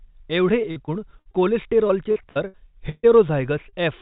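Speech carried over a call link that repeatedly lost or delayed packets, which is heard as repeated packet loss (robotic sound) from 0.62 to 1.35 s and again from 1.87 to 3.05 s. The receiver kept papering over each hole by extending the previous sound, so the speech turns choppy, with fragments missing. Roughly a fifth of the first stretch is patched, with no hole longer than 59 ms. Nearly a third of the second stretch is patched, and its longest hole is 138 ms. At 3.69 s, about 40 ms never arrived in time, a short concealed packet loss. It was filled from the preceding sound and blended back in, leaving a brief smear where a short sound may drop out. Throughout, nothing is heard above 4 kHz, which fits a narrowband telephone codec such as G.711.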